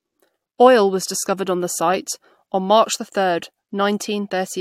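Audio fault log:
No audible faults detected.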